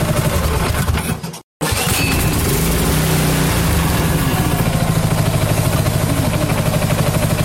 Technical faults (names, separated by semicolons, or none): damaged data in a compressed stream